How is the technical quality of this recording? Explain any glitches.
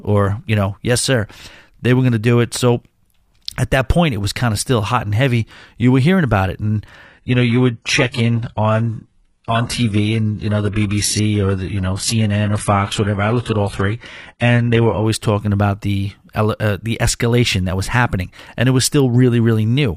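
There's one clear glitch: an adaptive stream at a lower bitrate, running from 7.05 s to 15.05 s, starting right after "hearing about it and" and ending just before "talking about the uh". For those eight seconds the player switched to a lower-bitrate version because the connection slowed, with no gap. Treble above 11.5 kHz vanishes and codec artefacts rise in the speech, which fits a drop from a moderate-rate AAC stream to a very low-rate HE-AAC one.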